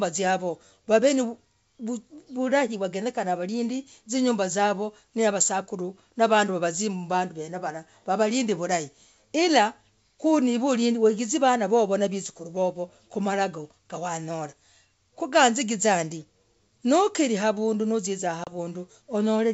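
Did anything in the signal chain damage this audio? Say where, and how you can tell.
Yes, at the network stage: packet loss on an ADPCM call, between 18.44 and 18.56 s. About 30 ms of a few packets drops to hard-edged silence. The decoder's adaptive predictor and step size then disagree with the sender's, so the G.722 speech resumes slightly distorted before resynchronising.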